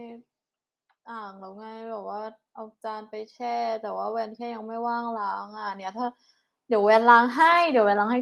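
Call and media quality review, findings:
Automatic gain rising from 1.06 s through the end: speech and room background swell up together, slow ramp rather than a jump. AGC likely judged the input too quiet and kept pushing gain. Top end stops near 12 kHz, which fits the Opus call path.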